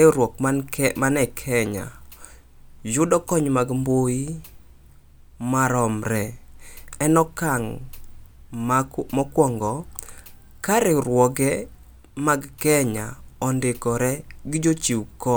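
No technical faults can be heard anywhere in this speech recording. Nothing in the audio stands out as a problem at any point.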